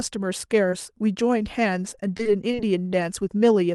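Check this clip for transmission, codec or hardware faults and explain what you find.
Three transmission faults are audible, all from packet delivery on a call path whose high end stops around 12 kHz.

Short concealed packet loss, 0.70–0.74 s: about 20 ms never arrived in time. The receiver extended the preceding sound to bridge it, leaving a brief smear.

Repeated packet loss (robotic sound), 1.95–2.55 s: four separate gaps, the longest about 22 ms, were each patched by continuing the previous sound. This covers roughly 13% of the span and sounds choppy.

Jitter buffer slow-down, 2.56–2.90 s: the receiver rebuilt its reserve by repeating pitch periods, adding 44 ms. Playback runs at 89% speed, drawn out but unchanged in pitch.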